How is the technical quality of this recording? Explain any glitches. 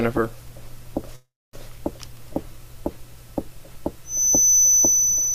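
Two glitches stand out: a call audio freeze early on and a feedback whistle at the end.

From 1.15 to 1.55 s, packets were likely held up and the jitter buffer ran dry, so the last sound stretches into a fading buzz or hiss, then about 0.24 s of silence. Nothing is lost, but everything after arrives about 0.38 s late.

From 4.03 s to the end, a loudspeaker-to-microphone loop likely sits right at the point of feedback, leaving a thin, steady-pitched 6 kHz whistle that slowly swells and fades, roughly 10 dB below the main sound.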